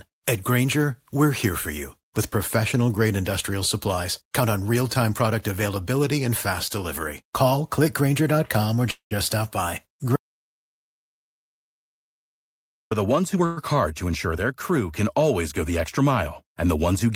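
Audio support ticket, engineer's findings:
Call audio freeze at 8.91–9.13 s and 13.45–13.59 s, just before "hard to ensure their". Sound held as a fading buzz, 194 ms then 113 ms, the first decaying to about 110 ms of silence. Likely jitter buffer underrun on late packets. Nothing lost, just gaps inserted.

Audio dropout to silence, 10.16–12.91 s, between "stop by" and "the ones". Hard cut to silence, no room tone, about 2.76 s of content gone. Likely the input dropped (link, device or mute) while the encoder kept writing silence.

Jitter buffer speed-up, 13.34–13.43 s, right after "the ones", into "hard to ensure their". Runs at 160% speed with pitch unchanged, sounds rushed. Buffer trimming excess delay by dropping pitch-period slices, around 50 ms cut in total.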